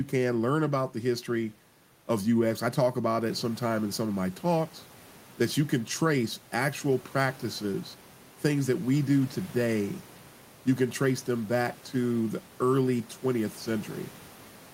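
No technical faults can be heard in this speech recording. The room's background noise steps up by about 10 dB a little after three seconds in and then stays about 25 dB below the speech.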